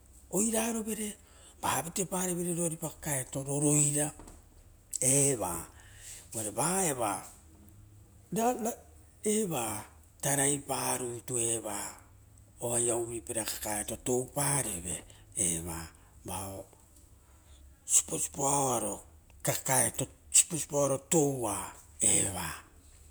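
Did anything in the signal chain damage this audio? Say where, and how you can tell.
No, nothing in the signal chain damaged this speech.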